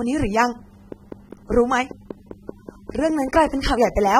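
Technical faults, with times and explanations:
Throughout: AAC compression. The speech sounds dull and smeared, with audible warbling and fizz on sibilants and nothing above about 16.6 kHz. This is likely a low-bitrate AAC-LC encode, around 27 kbps, where the hearing model discards and coarsely quantises detail the bit budget can't cover.
0.92 to 4.08 s: train of clicks. A steady ticking sits over the speech, about five clicks per second at a regular pace, roughly fifteen in all, peaking around 5 dB above the signal. Evenly spaced pulses of similar shape likely point to interference or a faulty connection.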